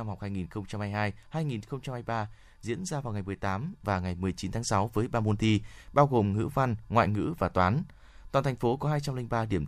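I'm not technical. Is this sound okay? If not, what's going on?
Yes, nothing stood out as a problem when listening to this speech.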